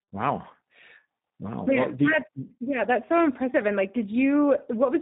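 Throughout the clip the call has passed through two speech coders in a row, a tandem speech coding fault. The signal was decoded and squeezed again at a network border, with the second, low-rate coder working on audio already roughened by the first. The character fits an ADPCM stage followed by an 8 kbit/s CELP coder such as G.729A. The speech sounds gritty and muffled, with a watery warble, and nothing survives above 3.8 kHz.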